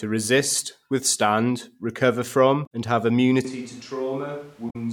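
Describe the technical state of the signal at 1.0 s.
At 1.0 s the speech signal is intact, with no fault audible at that moment.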